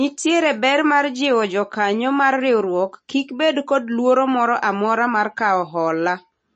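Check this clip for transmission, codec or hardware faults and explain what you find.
One fault runs through the whole recording: MP3 compression is the likely cause of the damage, audible from start to finish across the speech. Nothing is present above 8.4 kHz, because a bit-starved encoder cuts the treble at a fixed point and discards weak frequency lines, which then flicker in and out between frames. The result is a dull, watery sound with swirly, chirping sibilants and smeared consonant onsets, consistent with a very low bitrate of roughly 33 kbps.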